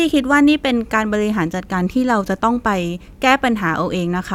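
No technical faults are audible.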